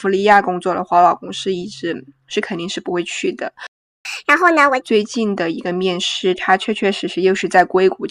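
At 3.67 s the speech just stops dead for about 380 ms, a playback stall, likely the player running dry or its thread getting blocked. From 4.05 to 4.81 s there's catch-up at higher speed: the backlog plays 1.5 times faster, pitch up roughly seven semitones, then settles back.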